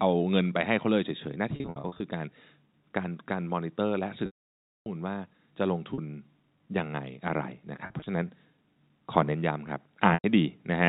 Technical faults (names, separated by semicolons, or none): packet loss with pitch repetition